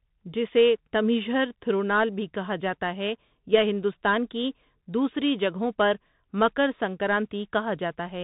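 Speech heard throughout through a Bluetooth CVSD headset codec: nothing above 4 kHz, scratchy s sounds and granular hiss, unlike smoother wideband mSBC, consistent with 64 kbps CVSD.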